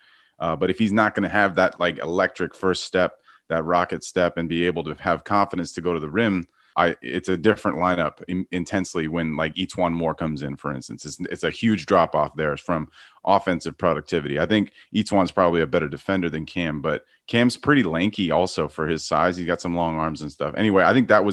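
The speech comes through a call-codec path with its top end rolled off at around 12 kHz, and no dropouts, glitches, level jumps or other technical faults are audible anywhere in it.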